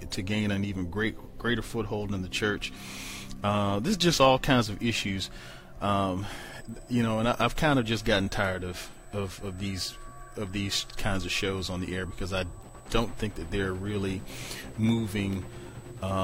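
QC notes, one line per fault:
6.51–16.24 s: USB whine. A fixed 8 kHz tone sits roughly 30 dB under the sound. It matches 125 µs USB microframes leaking through power or ground.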